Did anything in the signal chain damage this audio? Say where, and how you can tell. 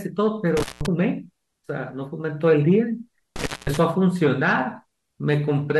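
Yes. The speech drops out twice, from 0.57 to 0.86 s and from 3.36 to 3.77 s, with crackle at the start and end of each gap and faint hiss in between. The signal is fully gone for about 175 ms and 210 ms. This is intermittent contact in the analogue wiring: a loose cable or plug briefly lost its connection, and the scraping contacts produced the crackle as the circuit opened and closed.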